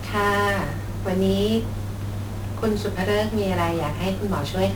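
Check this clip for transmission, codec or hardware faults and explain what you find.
One codec fault runs through the whole speech clip: 1-bit DFPWM compression. The encoder keeps only a single bit per sample, and each bit merely nudges an adaptive level up or down, so the waveform is rebuilt as a coarse staircase that can never settle exactly. The damage is heavy, which fits a rate around 48 kbps. The result is dense broadband quantisation noise: the speech sounds fuzzy and crackly throughout, with its upper detail smothered under hiss.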